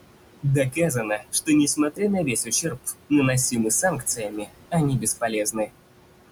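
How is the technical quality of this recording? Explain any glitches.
The recording suffers from heavy-handed noise reduction. The room noise, sitting about 12 dB below the speech, is pressed down hard, and parts of the speech go with it.

Noise suppressor artifacts run throughout. The background is pulled down by about 21 dB frame by frame, so the noise sinks between the words and rises under them, unlike steady unprocessed room noise.

Speech cut by the noise suppressor occurs at 0.64–1.49 s, 1.76–2.01 s, 2.22–2.94 s, 3.82–4.51 s and 5.0–5.72 s. Quieter speech is mistaken for noise and dropped by about 16 to 20 dB, so it sounds swallowed rather than cleanly clipped.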